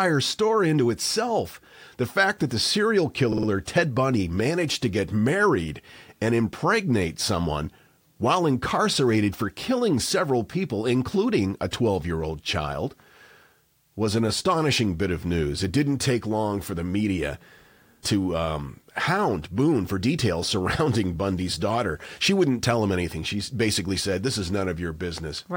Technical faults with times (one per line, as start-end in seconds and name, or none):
3.32-3.48 repeated frames